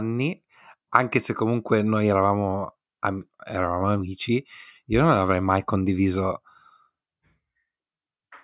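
A speech recording with no technical fault to point to. There is nothing here that needs a time stamp or an explanation of its cause.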